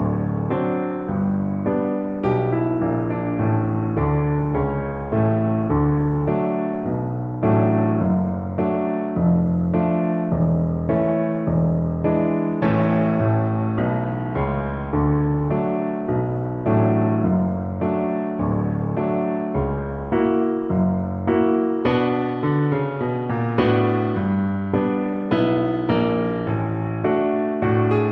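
Nothing stood out on a careful listen; no technical problem could be heard at any point in the audio.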